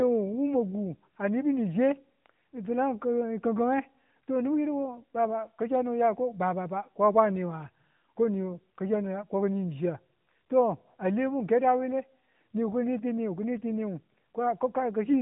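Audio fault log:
throughout, AMR narrowband mobile codec. The speech has passed through the AMR-NB phone codec, and the damage is plainly audible. Nothing above 3.8 kHz survives, so consonants lose their edge and the sound sits in the old telephone band. The codec rebuilds each 20 ms frame from a filter modelled on the vocal tract, driven by sparse pulses. That rebuild leaves a synthetic grain. Its strength fits a mid-rate mode near 10 kbps.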